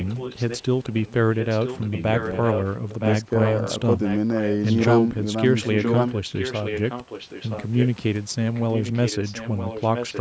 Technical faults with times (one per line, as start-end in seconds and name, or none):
0.00-4.85 echo leak
5.62-7.88 echo leak
8.54-10.20 echo leak